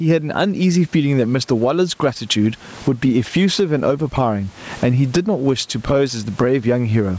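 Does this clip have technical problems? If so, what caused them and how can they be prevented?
Yes. Throughout the speech, gain pumping is audible: the gain swings by around 15 dB. Unlike a noise gate, which cuts the gaps to silence, pumping lifts the gain back up in them. The likely cause is microphone gain set far too high, forcing a fast limiter to clamp down constantly. Lowering the input gain so the limiter rarely engages prevents it.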